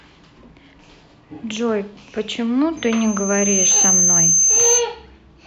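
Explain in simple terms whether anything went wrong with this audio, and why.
Something did go wrong. From 2.77 s to 4.85 s there is loudspeaker feedback squeal. A single high tone near 6.3 kHz swells over about a second until it is much louder than the speech. The microphone was catching its own loudspeaker, and that sound kept feeding back into itself.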